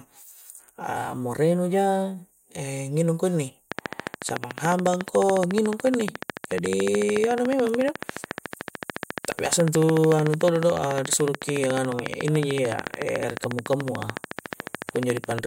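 Interference from nearby equipment or a faulty connection is the likely source of a train of clicks from 3.7 s to 15.4 s. Around 150 similar pulses arrive at a steady 13.9 per second, peaking roughly 15 dB above the speech, and tick audibly through pauses too.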